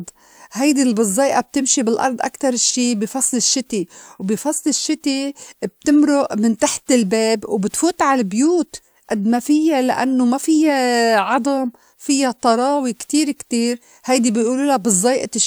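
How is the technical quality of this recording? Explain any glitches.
No technical faults are audible anywhere in the recording, so there are no glitches to explain.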